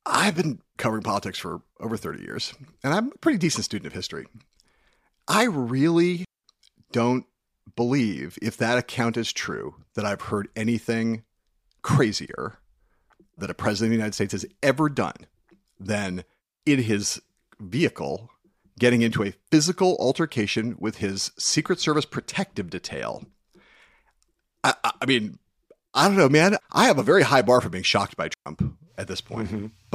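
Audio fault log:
6.25–6.44 s: digital wireless dropout. The sound cuts to near silence for about 0.2 s and resumes on "don't believe if that". The receiver lost too much of the digital link to decode and muted with a very fast fade, so the gap is clean, with no noise burst at either edge.
28.34–28.46 s: digital wireless dropout. A 121 ms clean hole follows "for being shocked by". It is the same mute-on-data-loss behaviour, shorter, with no noise before or after.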